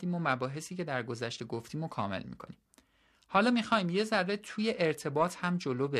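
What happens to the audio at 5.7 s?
At 5.7 s the speech carries periodic clock jitter. It is not a brief event. It runs through the whole clip, and this moment is simply part of it. Interference is wobbling the converter's sampling clock at a steady rate of around 1 kHz. Each component of the sound gains sidebands spaced about 1 kHz above and below it, strongest on the higher frequencies. The result is a rough, metallic edge on the speech that drops away in the pauses.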